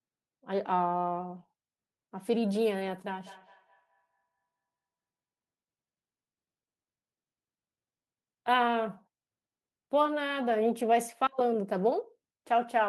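Speech, with feedback echo between two devices from 3.07 to 4.47 s: each syllable returns about every fifth of a second, peaking about 27 dB below the voice, as a second nearby device replays and re-captures the call. Waveform and spectrogram show evenly spaced, fading, thinner copies trailing each burst.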